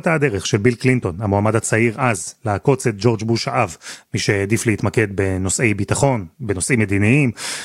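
No technical faults can be heard anywhere in the speech.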